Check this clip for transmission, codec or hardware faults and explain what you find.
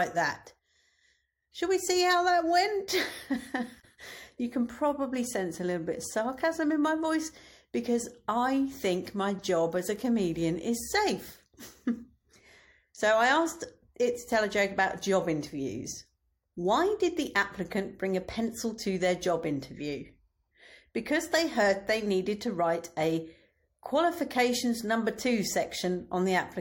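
One codec fault turns up in this speech clip. Damaged data in a compressed stream occurs from 3.78 to 3.85 s, just before "you can probably sense". Corrupted bytes leave the decoder unable to read those frames, so it loses sync and hunts for the next valid header, producing a brief glitch.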